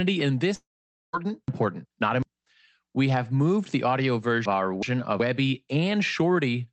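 At 0.55 to 1.15 s, a likely long network dropout: the last sound fades as a buzz, then about half a second of silence, and roughly 0.58 s never returns. Chunks out of order follow at 1.48 to 2.23 s and, just after "have moved the audio", at 4.45 to 5.20 s. A 0.37 s chunk plays one slot late, giving jumbled, hard joins over the 8 kHz-limited Opus call sound.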